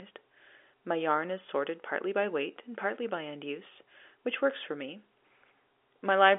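No technical faults can be heard in the speech, which is carried over a telephone line coded as G.711 A-law at 64 kbps, with the band running from about 300 Hz to 3.5 kHz and nothing present above roughly 3.7 kHz.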